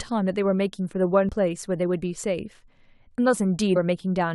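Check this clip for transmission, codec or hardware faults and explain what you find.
The speech clip has two brief faults from damaged data in a compressed stream, at 1.29 s and 3.75 s. Corrupted frames make the decoder lose sync and misdecode, producing a short chirp or blip. Each appears as a thin broadband smear on a spectrogram and a jagged spike in the waveform.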